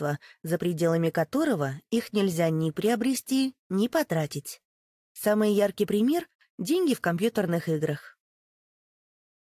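Nothing here stands out as a technical problem; the audio just runs along without any glitches, dropouts or other trouble worth pointing to.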